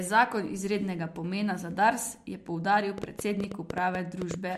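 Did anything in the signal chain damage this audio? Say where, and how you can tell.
Yes. After "je poudaril", from 2.98 to 4.35 s, about ten similar clicks tick over the speech, roughly 8 per second, unevenly spaced and well above it. This train of clicks is likely interference in the analogue wiring or a struggling interface.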